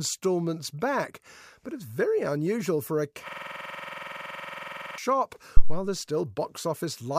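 A speech recording, and right after "very unusual for a" at 3.28 s the audio locks into a rapid, rattling stutter that runs until 4.98 s. It is one 46 ms fragment repeated exactly, 37 times over, at 21.5 Hz, which sits between a buzz and a machine-gun rattle. This is a system hang loop: the computer or driver stalled while the audio hardware kept replaying the same ring buffer, and the loop length fits a 2048-sample buffer. Shortly afterwards, from 5.57 to 5.85 s, a deep low thump sounds and dies away over about 62 ms. That is a phantom power thump, where phantom power or another supply was switched on or off on the live input and the sudden voltage step passed through the coupling capacitors as a low-frequency pulse.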